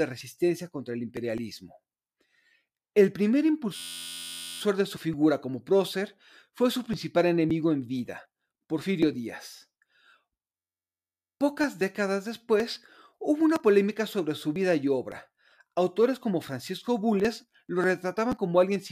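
From 3.76 to 4.61 s, just before "de su figura como", and again from 10.57 to 11.39 s, a system hang loop repeats one 11.6 ms slice. The result is a steady 86 Hz buzz, which fits a 512-sample buffer.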